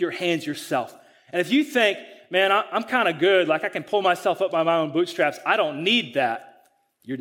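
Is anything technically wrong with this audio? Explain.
No, nothing technical stands out here; the speech comes across steady and intact the whole way, with no faults to point to.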